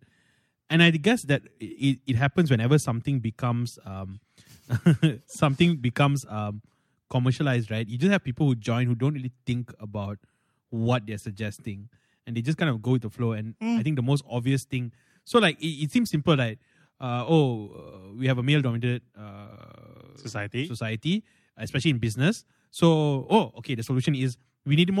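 A speech recording, and nothing is technically wrong with it.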